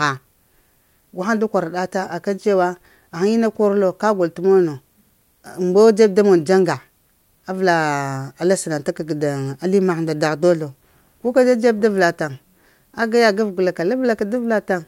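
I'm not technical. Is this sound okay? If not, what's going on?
Yes, nothing in this recording stood out as a problem when I listened to it.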